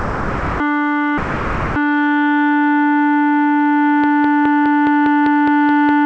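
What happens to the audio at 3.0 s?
Nothing goes wrong at 3.0 s: the music carries straight through that moment intact, heard as it is throughout the call path, a G.722 link that keeps nothing above 8 kHz.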